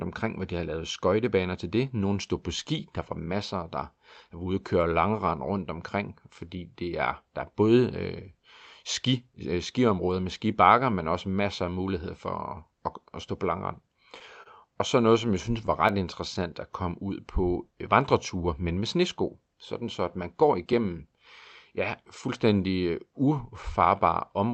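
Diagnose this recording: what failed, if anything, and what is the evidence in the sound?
Network and jitter buffer: a late packet emptied the buffer at 14.43 s, and the receiver held the last sound for about 30 ms, a short stall with a slight buzz or dip.

Network stage: scattered short gaps between 15.02 and 15.92 s, where roughly five lost or late packets, each patched for about 10 ms or less, leave brief ticks and smears.

Jitter buffer slow-down from 16.83 to 17.75 s, just before "øh vandreture men med": the buffer repeated pitch periods, adding 59 ms, so the speech drags at 94% speed with unchanged pitch.

Jitter buffer speed-up from 20.18 to 20.99 s, after "så at": the buffer trimmed about 100 ms of pitch periods to cut delay, so the speech hurries at 111% speed.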